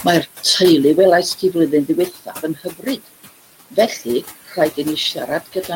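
Speech with room noise sitting about 16 dB under it, and a noise suppressor working hard on it throughout, pulling the background down by about 16 dB. That's the noise suppressor artifacts: the leftover noise pumps, dropping in the gaps and swelling under the talking. The suppressor also mistakes some of the speech for noise. Between 2.07 and 3.08 s, about half a second of softer speech gets ducked by up to about 16 dB. Shorter bits at 3.71 to 4.07 s (about 11 dB) and 4.48 to 4.57 s (about 10 dB) get the same treatment, so those stretches sound swallowed and faint. That's classic speech cut by the noise suppressor.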